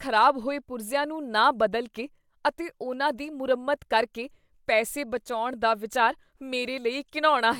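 Listening to the speech here, nothing stood out as a technical fault at any point.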